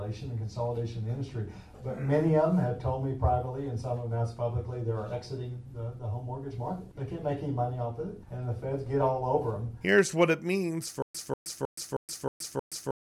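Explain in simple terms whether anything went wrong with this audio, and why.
Something goes wrong at 11.02 seconds and lasts to the end. This is a stutter with silent gaps. A short burst of about 192 ms plays, then stops for about 122 ms of complete silence. The same burst returns every 314 ms, six times in a row. The likely cause is the player or stream stalling. Each time it retried, it replayed its last fragment and then ran dry. The audio that should have filled those final two seconds is missing.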